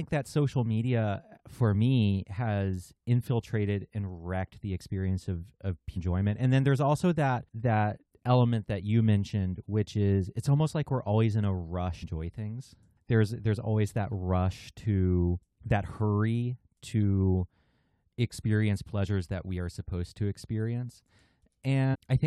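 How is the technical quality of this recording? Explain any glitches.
The recording has three brief glitches from damaged data in a compressed stream: at 5.96 s after "the experience of of", at 12.02 s after "we're always in a", and at 21.93–21.96 s. Corrupted bytes make the decoder misread frames and resync, causing short chirps or blips. On a spectrogram each is a thin broadband vertical smear, and on the waveform an abrupt discontinuity.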